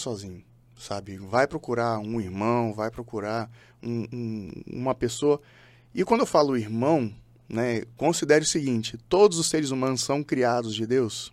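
Speech recording, no technical faults heard anywhere in it.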